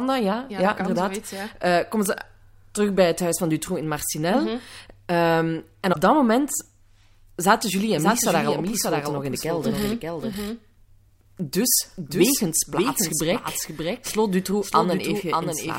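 At 5.89 to 5.96 s there's a short glitch from damaged data in the compressed stream. A stretch of bad bytes left the decoder misreading frames and losing sync, so it hunted for the next frame header, and you get that brief glitch.

From 7.97 s right through to the end, there's a doubled audio track. A second full-band copy of the speech trails about half a second behind and sits maybe 5 dB down. It cuts in abruptly, with no decay or room colour. That's likely a second, slower capture path mixed in alongside the first.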